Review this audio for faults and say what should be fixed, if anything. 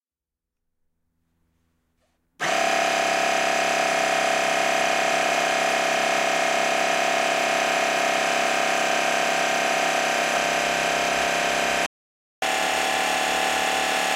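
A playback stall silences the sound from 11.86 to 12.42 s, a gap of 0.56 s, likely because the player ran out of buffered data or its audio thread was blocked. On the waveform this is a flat line; on a spectrogram, a blank vertical band. Giving the player a deeper buffer and keeping the audio thread free of blocking work would prevent it.

Catch-up at higher speed follows from 12.42 s to the end. The backlog plays at 1.1 times normal speed, which raises the pitch by about one and a half semitones. On a spectrogram the harmonics shift upward, and the waveform's events come closer together. Draining the backlog gradually, or time-stretching without changing pitch, would prevent the audible shift.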